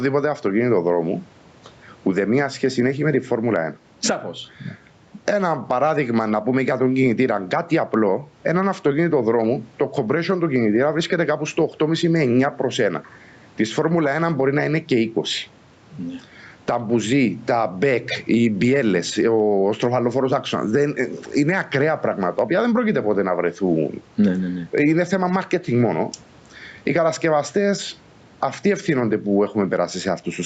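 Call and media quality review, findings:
Loud and soft parts pulled closer in level throughout, with around 10 dB of swing and squashed speech. Gain pumping, likely from excessive mic gain driving a fast limiter.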